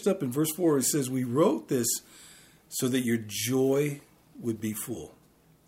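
Two short stretches of chunks out of order are audible, at 0.86 to 0.90 s and 4.56 to 4.62 s. In each, a block of audio plays after material that should have followed it, so the sound briefly jumbles across the hard joins. No audio is missing, only misplaced. The spans fit 20 ms blocks, with one block arriving a single slot late at the first point and two slots late at the second.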